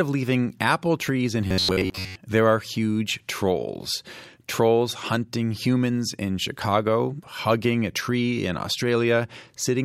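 From 1.47 to 2.16 s the speech takes on a rigid, metallic buzz near 93.8 Hz that still loosely tracks the words: robotic sound from repeated short buffers. The likely cause is starved input, with roughly 11 ms segments looped over most of the span.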